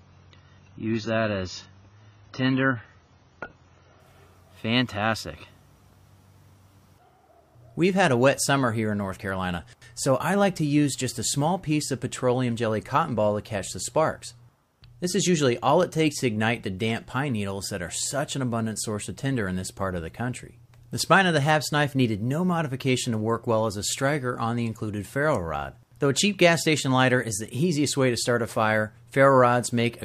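For the first 4 s the audio sounds dull, nothing above 7 kHz, with stronger codec smearing, then it jumps cleanly to better quality. That's an adaptive stream starting at a low bitrate, pointing to roughly 16 kbit/s AAC before stepping up near 96.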